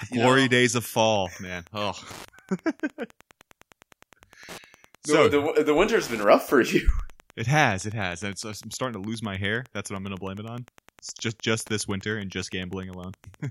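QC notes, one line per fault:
Throughout, Wi-Fi interference: a nearby radio's beacon, rectified by the audio circuit, ticks every 102.4 ms, roughly ten times a second, sitting around 30 dB below the speech.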